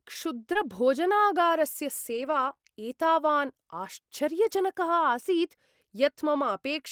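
Right at the start, around 0.53 to 0.57 s, there's a short concealed packet loss. About 20 ms of audio never arrived in time, so the decoder stretched the last bit of sound forward to paper over it before blending back into the real signal. That comes across as a tiny smear or wobble. Overlapping the tail of it, from 0.55 to 0.57 s, is a lost packet rebuilt from error correction: the following packet carried a low-bitrate backup copy, so those 20 ms play without a gap but sound a little rougher and grainier.

Then from about 2.13 to 2.67 s you get repeated packet loss, the robotic-sounding kind. Three separate holes land in that half-second, the longest about 24 ms, adding up to roughly 60 ms missing, or about 11% of the stretch. Each one gets patched by extending the previous sound, and the next arrives before things settle, so the region turns choppy, with the decoder's guesses and recovery smeared across something like a fifth of a second.

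Finally, from 4.45 to 4.59 s, there's another lost packet rebuilt from error correction, this time covering about 80 ms across four separate lost packets. There's no dropout, since the backup copies fill in, but that stretch is coarser and noisier than its surroundings.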